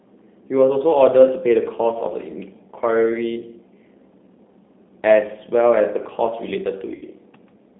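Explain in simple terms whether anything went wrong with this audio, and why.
Yes, two things went wrong. Throughout, the speech sounds thin, slightly rough and synthetic, as if heard down a phone line with nothing above about 3.6 kHz. That is the G.729 codec, a low-data internet-phone format that rebuilds each short slice of voice from a simplified model instead of sending the real sound.

From 6.95 to 7.03 s, the voice briefly turns into a stretched buzzy tone or coloured noise that fades, then sounds weak as it recovers. That is VoIP packet loss concealed by the speech codec. About 60 ms of sound never arrived, so the decoder guessed by stretching the last bit it had while lowering the volume.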